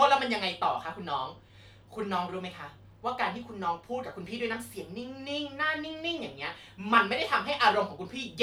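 Nothing in the speech stood out as a technical problem on listening.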